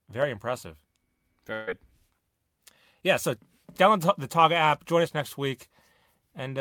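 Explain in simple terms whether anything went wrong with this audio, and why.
Something did go wrong, once. From about 1.53 to 1.69 seconds there is a burst of packet loss. A short run of the speech never arrived in time. The receiving end patched the hole by stretching the last sound it had. For about 136 ms you hear that sound held on as a buzz or hiss, fading away. Then the speech jumps ahead. About 140 ms of what was said is simply gone.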